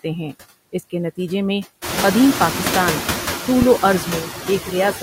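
Noise suppressor artifacts run the whole way through. The suppressor pulls the background down by about 7 dB between phrases and lets it back up under the speech. The room noise jumps by about 18 dB around two seconds in and sits about 10 dB under the voice.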